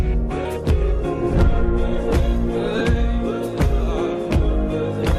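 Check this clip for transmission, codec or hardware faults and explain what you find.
One fault is present: lost LE Audio frames. At 2.79 to 2.81 s, about 15 ms of Bluetooth LE Audio went missing. The gap fits two 7.5 ms LC3 frames. The decoder filled it by repeating the last spectrum with random signs. The sound briefly turns into a noisy smear, with tones losing their clarity. The loss is short, so there is no fade toward silence.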